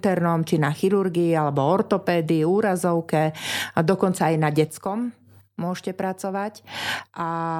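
At 4.69 s the speech drops suddenly by about 6 dB and stays there to the end. This is a sudden gain jump. The level likely changed between two samples with no ramp. Voice and background noise fall together, abruptly.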